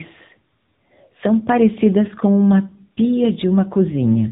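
A short speech clip with tandem speech coding throughout: the signal passes through CVSD at 64 kbit/s, then G.711 A-law, then AMR-NB at 7.95 kbit/s. That is two speech codecs in series, so AMR-NB encodes audio already roughened by CVSD's delta-modulation noise, compounding the errors. The voice sounds gritty, muffled and warbly, with nothing above about 3.8 kHz, consistent with a narrowband telephone path.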